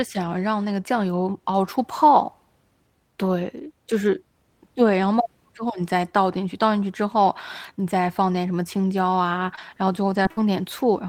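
Right near the end, at 9.55 to 9.60 s, there's a short concealed packet loss. About 15 ms is filled by the decoder stretching the preceding speech before it blends back in, and about 20 ms of real audio never arrives, so you get a quick smear or wobble. Inside that, at 9.57 to 9.59 s, a lost packet was rebuilt from error correction: a 20 ms frame played from the low-bitrate redundant copy, rougher and noisier than its neighbours.

The same pairing comes again at 10.23 to 10.28 s. The concealment fills about 21 ms and again skips about 20 ms, and the stretch from 10.25 to 10.27 s is a 20 ms rebuilt frame with that grainy texture.

Then at 10.31 to 10.40 s there's a burst of packet loss. About 56 ms is covered by the last sound carried on and faded down, so you hear a held buzz or sinking hiss, and about 60 ms of speech is gone when it picks up again. One more 20 ms frame inside it, 10.37 to 10.39 s, comes from the error-correction copy.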